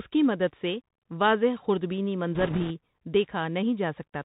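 From the first moment the speech has that boxed-in Bluetooth CVSD headset codec sound, which fits a 64 kbps CVSD stream. The codec sends one bit per sample saying up or down and adapts its step size, so nothing above 4 kHz gets through. Here the damage is plainly audible: the top end is gone, s sounds come out scratchy, and a fine granular hiss sits under the whole thing.

Then from 2.35 to 2.71 s, right after "مدد سے واضح خردبینی", you get bit errors on a Bluetooth voice link. Bits were flipped in that CVSD stream, something like 3 percent of them. Each bit only nudges the signal a little and the error fades out, so instead of sharp clicks you hear a rushing, crackly noise smeared over the speech for that third of a second.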